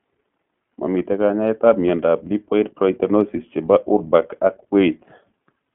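Throughout the speech, the iLBC codec restricts the band to roughly 200 Hz to 3.4 kHz and codes each 20 ms frame's excitation independently. The result is a plainly rough, slightly synthetic texture, consistent with iLBC's 15.2 kbps mode.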